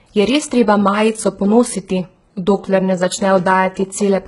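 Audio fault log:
Throughout, HE-AAC compression: heavy damage across the speech, with gritty, lispy s sounds and nothing above 11.1 kHz. The treble is likely pasted up from lower bands by spectral band replication, which fits a bitrate of around 12 kbps, so its harmonics don't line up with the real ones.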